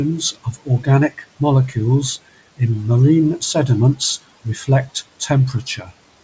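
The noise suppressor misjudged parts of the speech as noise and cut them: 0.2–0.88 s (about 14 dB down), 1.09–1.41 s (about 16 dB) and 5.66–5.9 s (about 7 dB). Short fragments sound swallowed and faint.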